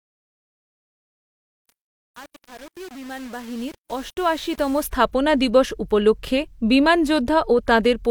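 From 0.0 to 4.87 s the speech emerges from gritty, grainy sound, clearing just before "স্থাপনা দিবস উপলক্ষে বিমান". This is truncation distortion on a fade: the fade-in kept too few bits, consistent with a 7-bit undithered stage, so the quiet waveform collapses into coarse square steps.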